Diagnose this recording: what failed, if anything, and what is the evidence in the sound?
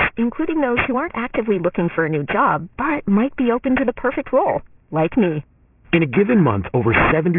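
Aliasing runs through the whole clip, from a sample-rate conversion stage. Sibilants sound gritty and metallic, and the spectrum runs hard up to an edge at 3 kHz. That points to resampling down to about 6 kHz without an anti-alias filter. The energy above 3 kHz folds back as false tones only around 10 dB below the speech.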